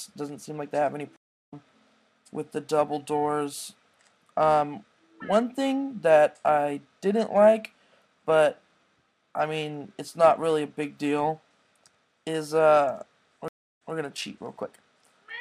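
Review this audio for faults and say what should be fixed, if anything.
Two stream reconnects are audible. At 1.16 to 1.54 s the audio drops out for 303 ms, then resumes about 0.3 s further on, so a short stretch is skipped. At 13.48 to 13.94 s it goes silent for 271 ms and comes back 183 ms earlier, repeating a short stretch. Each time the connection broke, the player restarted its decoder mid-stream, and the first frame fades in. A larger network buffer with seamless resume would prevent these gaps.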